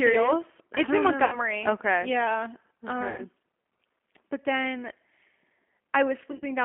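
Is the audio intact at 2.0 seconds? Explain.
No. Throughout the clip, including at 2.0 s, the speech passes through the G.729 codec, which rebuilds it from a vocal tract model and sparse pulses at what sounds like 8 kbit/s. The band is held to 250 Hz–3.4 kHz, and the speech sounds plainly rough and synthetic.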